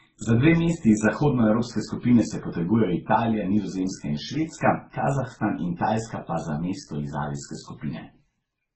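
Across the whole recording, the speech was likely encoded with one lossy codec and then re-encoded at a low rate, pointing to MP3 followed by Opus. Nothing remains above 8.2 kHz, and the different artefacts of the two codecs are heard together, a transcoding between lossy codecs.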